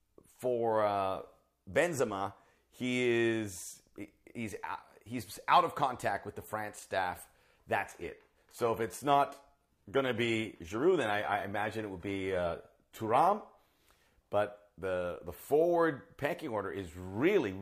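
It's a speech clip that drops to a lower-bitrate adaptive stream from 7.88 to 13.88 s: the quality changes suddenly with no gap and nothing comes through above 14.9 kHz, which fits a switch from a roughly 96 kbit/s AAC stream to a thin HE-AAC one while the connection slowed.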